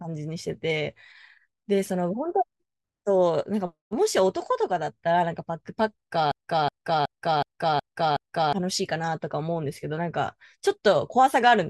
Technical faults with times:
6.32-8.53 broken-record loop

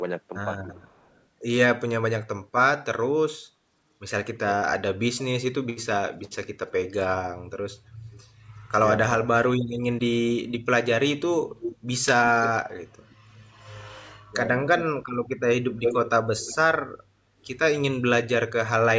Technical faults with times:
0.68-1.23 echo leak
6.27-6.72 echo leak
8.12-8.23 echo leak
11.60-13.15 echo leak
14.31-14.36 speech suppressed in double talk
14.77-16.56 echo leak

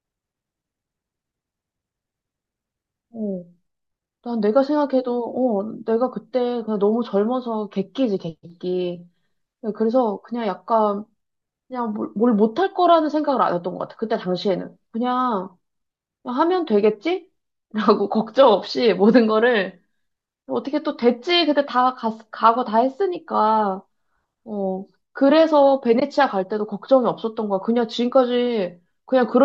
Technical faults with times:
26.00-26.02 AAC frame loss with muting

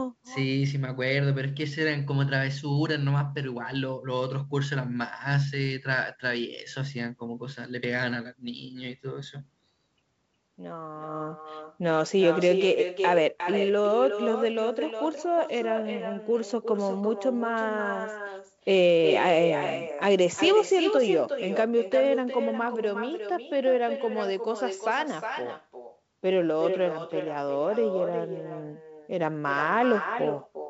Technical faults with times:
0.00-30.70 echo with no canceller

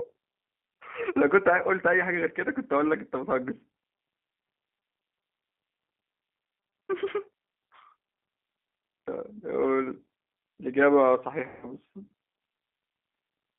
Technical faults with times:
0.00-13.59 G.729 codec
0.75 VoIP packet loss concealed by the speech codec
9.38-9.44 VoIP packet loss concealed by the speech codec
11.48-11.69 VoIP packet loss concealed by the speech codec

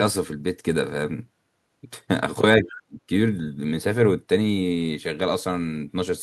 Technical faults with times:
2.58-2.99 speech suppressed in double talk
2.69-2.77 other side's voice leaking through

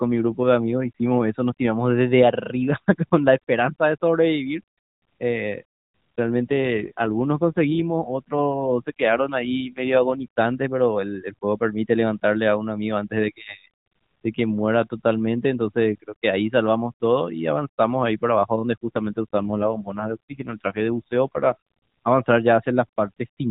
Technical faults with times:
6.51-10.25 AMR rate drop
18.84-22.12 AMR rate drop

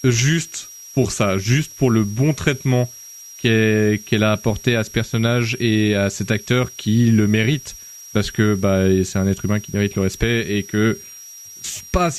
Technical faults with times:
0.00-12.19 switching supply whistle

